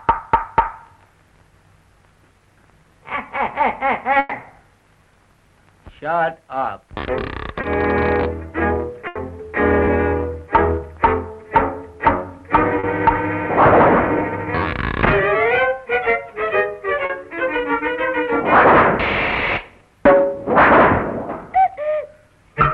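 At 4.19 to 4.33 s the sound stretches into a held, fading tail before jumping ahead. This is a burst of packet loss: about 120 ms never arrived, and the receiver extended and faded the last sound over the gap, dropping that stretch. Brief smears or wobbles at 7.61 to 7.65 s and 9.85 to 9.89 s are short concealed packet loss, where 20 ms holes were patched by continuing the preceding sound. A second burst at 9.07 to 9.17 s bridges 80 ms the same way. Further short concealed losses of 40 ms occur at 12.79 to 12.85 s and 17.05 to 17.11 s.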